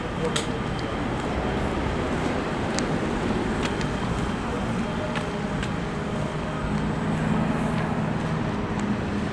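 No technical faults are audible anywhere in this recording.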